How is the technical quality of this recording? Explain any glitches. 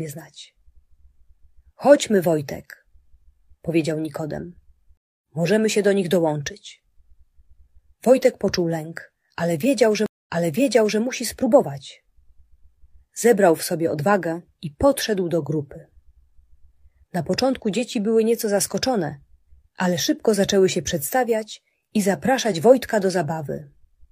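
The recording has two stream reconnect dropouts. At 4.97 to 5.27 s the connection broke: about 0.26 s of silence, then a fresh decoder resumed roughly a fifth of a second later, skipping material. At 10.06 to 11.0 s, 0.2 s of silence is followed by playback restarting 0.74 s earlier, so a stretch repeats. On a waveform each appears as a flat gap with a fade-in afterward. A spectrogram shows a blank vertical band and a discontinuity where the content jumps.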